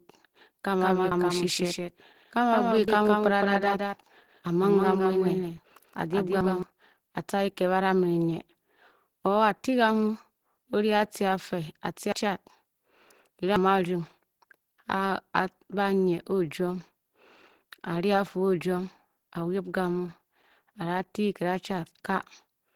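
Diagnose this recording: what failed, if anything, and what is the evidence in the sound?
Opus compression, throughout: grainy, hoarse speech, likely from the codec stage running at 16 kbps in its hybrid speech mode, which fills bands roughly.

Doubled audio track, 0.80 to 6.63 s: an abrupt full-band copy follows roughly 150 ms behind, about 5 dB quieter, likely a second capture path.

Dropped buffer (overrun), at 2.88, 9.24, 12.12 and 13.56 s: jumps where the sound skips ahead by roughly 50, 50, 150 and 100 ms, likely an unread driver buffer that was overwritten.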